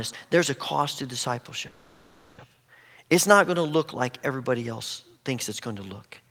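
From 1.67 to 2.40 s the speech stalls into a fading buzz or hiss for about 710 ms, then resumes intact: a call audio freeze, likely from delayed packets draining the jitter buffer.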